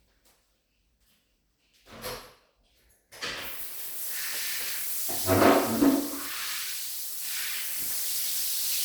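An everyday-sound clip with chunks out of order at 4.35–4.69 s and 8.19–8.45 s. An 85 ms chunk plays three, then two, chunks late, jumbling the sound.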